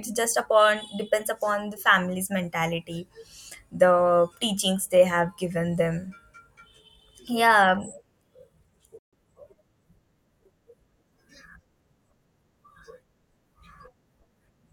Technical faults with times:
8.99-9.13 playback stall

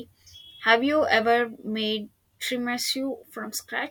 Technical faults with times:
none

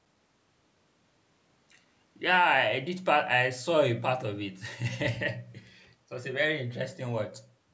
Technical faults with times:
none

